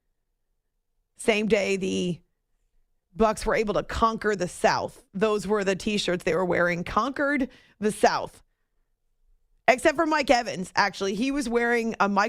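No technical faults can be heard anywhere in this speech recording. There is nothing to mark at any point along its timeline.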